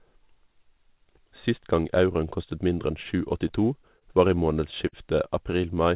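Between 3.48 and 4.05 s, just before "var i", packets kept arriving late. The jitter buffer emptied four times and stretched the last sound for 56 ms in total, longest 28 ms, so the speech drags and stutters. From 4.88 to 4.96 s, right after "var i", a single late packet caused a short stall. The receiver held the sound for an extra 51 ms, a brief smeared hold with nothing lost. The band stops at 4 kHz, which fits a G.711 A-law call path at 64 kbps.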